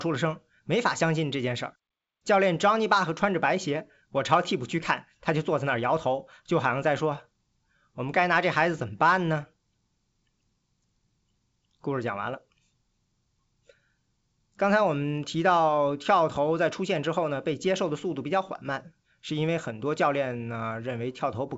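A speech recording with no technical fault to point to at any moment. It carries G.722 wideband telephone coding at 64 kbit/s, heard as a band that stops around 7.7 kHz with at most a faint trace of the codec.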